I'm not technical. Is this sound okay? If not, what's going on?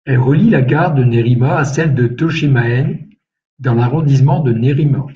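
Yes, this speech recording sounds fine, with no technical problems to be heard. Nothing here needs fixing.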